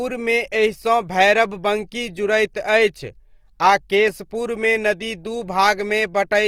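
From start to finish the speech sounds grainy and rough, with a plainly audible noisy texture laid over it rather than swirling dropouts. This is likely Opus compression in its music mode, at a low bitrate near 24 kbps, filling starved bands with noise while keeping full bandwidth.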